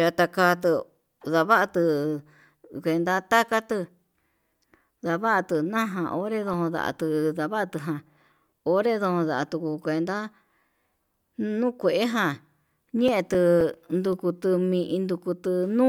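Two bursts of CD scratch ticks turn up in the speech, from 6.01 to 7.32 s and again from 12.82 to 14.13 s, six ticks each at a steady rate of roughly four or five a second. That regularity is the disc turning: a blemish wipes out more data than error correction can rebuild, once per revolution, so the player patches over the gap. Each tick is a tiny dropout just a few milliseconds long.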